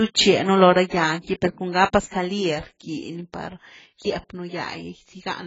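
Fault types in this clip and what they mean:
AAC compression: The whole clip of speech sounds dull and smeared. Nothing is present above 7.6 kHz, and the band below carries a fizzy, warbling texture, strongest on sibilants and held sounds. That texture is what separates it from a simple low-pass filter, which would remove the highs but leave the remaining band clean. The likely cause is AAC-LC coding at a very low bitrate, around 16 kbps, with heavy quantisation.
pre-echo: From about 2.07 to 2.12 s, a hiss of roughly 56 ms rises just before a sharp onset, and the attack itself sounds softened. The transform coder spread quantisation noise across the whole block, so the noise set for the loud attack also filled the quiet stretch ahead of it. Reverb or an echo trails after a sound. This noise comes before it and is tied to a single transient.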